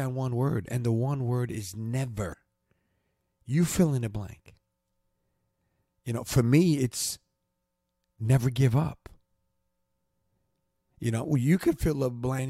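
A brief glitch at 2.32 to 2.34 s, just after "the one word is", and another at 12.38 s: damaged data in the compressed stream, where the decoder misread frames and lost sync.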